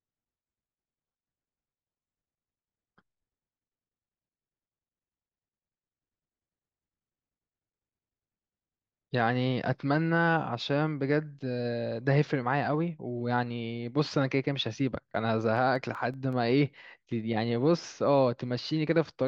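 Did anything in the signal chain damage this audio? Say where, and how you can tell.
Yes: CD scratch ticks, 15.19 to 16.52 s, at the storage and playback stage. Eight ticks of a few milliseconds each recur about six times a second, once per disc rotation, where a scratch defeated error correction.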